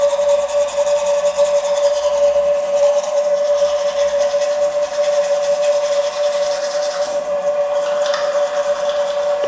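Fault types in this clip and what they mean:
No technical fault can be heard in this audio. There is nothing to list for it.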